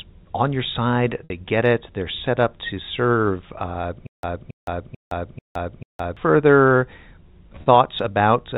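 At 1.24 s, packet loss with pitch repetition: about 60 ms of audio went missing, which fits three lost packets, and the receiver filled the hole by repeating the last pitch period. The sound briefly holds on a slightly buzzy tone before the speech resumes.

From 4.07 to 6.17 s comes a stutter with silent gaps, likely from a stalled stream replaying its last fragment at each retry. A 276 ms burst returns five times, every 440 ms, separated by 164 ms of dead silence. The intervening audio is lost.

At 7.62 s the packet loss with pitch repetition returns, this time bridging about 40 ms (two packets' worth) with the same short, held buzz, heard through the narrow G.711 telephone band.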